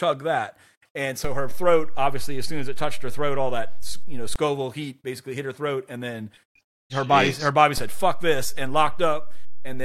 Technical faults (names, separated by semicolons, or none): DC step